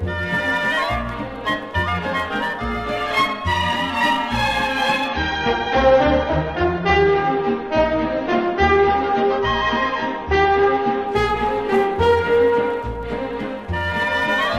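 The audio has an adaptive stream at a lower bitrate from 5.08 s to 11.08 s. Quality drops abruptly at 5.08 s with no gap: nothing remains above 6.5 kHz and codec artefacts thicken, which fits an AAC stream falling from around 96 kbit/s to around 24 kbit/s. The stream switched to a cheaper rendition, probably because throughput fell. At 11.08 s the full bandwidth returns just as suddenly, after six seconds at reduced quality.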